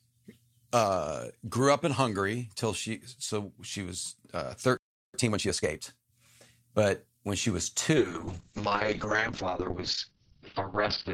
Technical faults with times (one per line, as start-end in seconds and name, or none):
4.77-5.14 playback stall
5.14-5.86 time-compressed catch-up
7.97-11.13 call bitrate drop